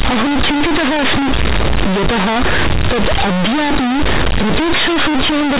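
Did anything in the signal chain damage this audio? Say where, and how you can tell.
Yes, at the sample-format conversion stage: the clip suffers from companded audio read as linear. The mu-law bytes were passed straight through as plain 8-bit samples, never expanded. Every sign change throws the output across roughly half its range, so quiet passages come out as loud as peaks. Across the whole clip the speech is harsh, buzzy, heavily distorted, and the pauses are filled with loud noise. The G.711 coding itself, which points to an 8 kHz telephone stream, isn't at fault.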